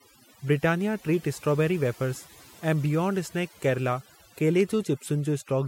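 From start to finish the speech carries overdone noise removal: a noise reducer set too aggressively pulls individual frequency bands down whenever they approach its noise estimate, taking quiet parts of the voice along. Pauses collapse to near silence with twinkling specks.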